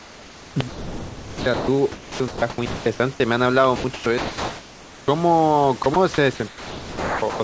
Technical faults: sound chopped by the voice detector

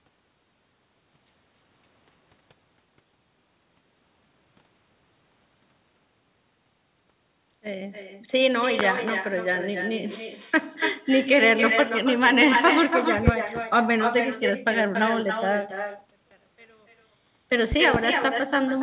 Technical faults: echo with no canceller; loud pop; one channel inverted

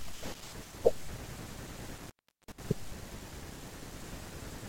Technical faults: intermittent contact

